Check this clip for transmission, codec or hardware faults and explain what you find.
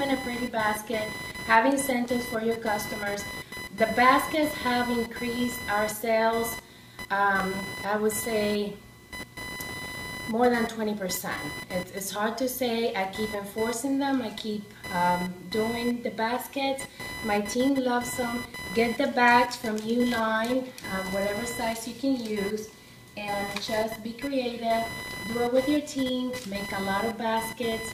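Two hardware faults show up: a computer activity noise running the whole way through, and three short skips that sound like dropped buffers.

The computer activity noise sits under everything from start to finish, a buzzy whine pulsing at roughly 1 kHz and only about 10 dB below the wanted signal, so it's hard to miss. It follows the machine rather than the audio: processor or graphics load shifts the shared ground reference, and the converter picks that up as a buzz in the output.

At 2.06 s, 7.40 s and 12.16 s there's a jump forward in the sound, with no gap of silence. The first and third skip around 10 ms, and the one at 7.40 s is shorter, around 5 ms. The likely cause is a dropped buffer (overrun): the software didn't collect its samples before the hardware overwrote them, so that slice was lost and the surrounding audio was joined directly together.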